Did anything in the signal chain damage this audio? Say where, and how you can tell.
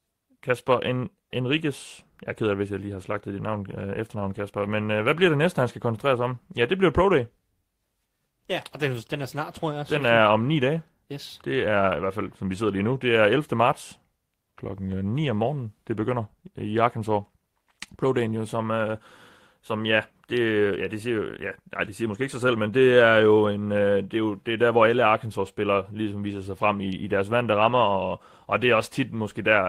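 No, nothing in the signal chain audibly damaged this speech.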